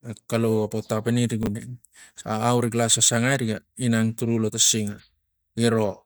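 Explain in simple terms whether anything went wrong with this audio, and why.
From 1.43 to 1.47 s, chunks out of order: a 10 ms slice plays three slices late, causing a jumbled moment. Unlike a dropout, nothing is missing.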